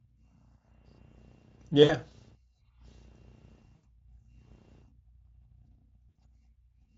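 VoIP packet loss concealed by the speech codec interrupts this speech clip at 1.83–1.94 s, 3.75–3.85 s and 6.09–6.16 s. The decoder fills each gap by repeating its last pitch and filter at falling gain, giving a fading buzzy or noisy smear, and the voice stays weakened briefly after packets resume.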